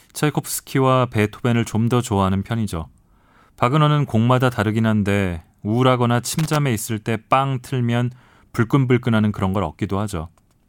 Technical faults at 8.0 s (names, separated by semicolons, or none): none